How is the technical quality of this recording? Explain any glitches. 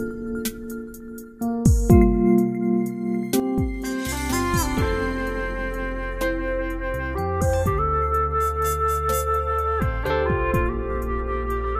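The recording has one clear fault: a sudden gain jump. At 3.40 s the level drops by about 9 dB in a single step and stays there to the end. The sound and its background noise fall together, which points to a digital gain change likely applied without a ramp.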